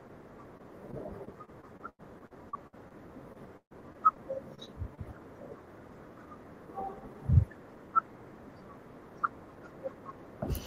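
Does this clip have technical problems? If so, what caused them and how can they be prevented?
Yes. Repeated packet loss (robotic sound) occurs from 0.57 to 2.93 s and from 3.33 to 4.99 s. Audio packets kept arriving late or not at all, and each hole was patched by stretching the preceding sound. In both stretches the speech turns choppy, with gaps of up to 94 ms and 138 ms. A steadier network path, plus a larger jitter buffer or forward error correction, would prevent this.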